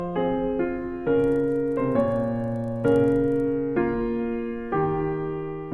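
From 1.2 to 3.52 s there's a steady ticking at 25 Hz, which is the signature of a resampler restarted on every block. The 48 kHz to 24 kHz conversion was done in separate 40 ms chunks, so at each chunk boundary the filter had no real neighbouring samples to work with and left a small error. Those errors line up into a regular tick train that rides along with the sound.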